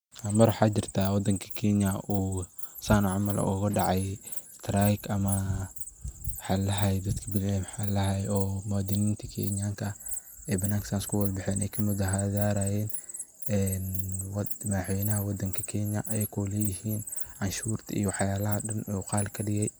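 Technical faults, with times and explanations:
There are no technical faults, with times or explanations, to report.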